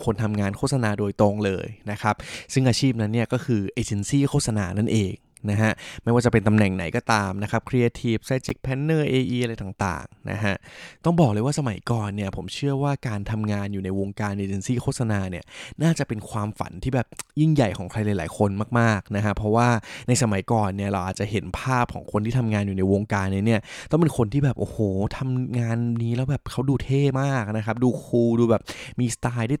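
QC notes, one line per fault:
8.44–8.52 s, corrupt frame decoded: a short, harsh chirp-and-noise burst, fairly loud and peaking around -5 dBFS, lasting about 80 ms. It sounds like a few damaged compressed frames got decoded anyway, with bad gains and misread codes throwing energy into the wrong frequencies.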